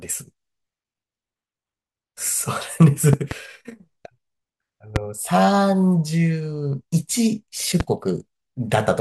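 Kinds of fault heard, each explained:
Loud pop: sharp transients sit on top of the speech, which continues underneath: a double pop from 3.13 to 3.34 s, then single pops at 4.96 s and 7.80 s, each peaking roughly 15 dB above the speech, likely from voltage spikes such as a switch or static discharge.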